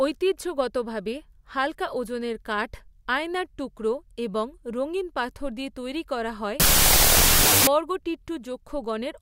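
From 6.60 s to 7.67 s the speech collapses into loud, harsh noise with a slowed, octave-lowered version of the voice buried inside. This is a wrong sample width fault. The half-speed playback fits 32-bit samples read as 16-bit, so each original sample splits in two. The upper halves keep the real waveform and the lower halves add near-random values. The half speed and pitch drop set it apart from a byte-order error, which keeps timing intact.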